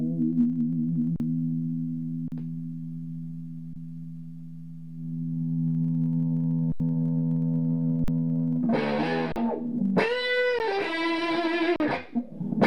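Underrun with held sample occurs at 1.16, 2.28, 3.73, 6.72, 8.04, 9.32, 10.59 and 11.76 s. The output buffer ran dry, and the converter froze on its last value. The sound flatlines for mostly 40 ms (80 ms at 6.72 s), then resumes past the lost audio.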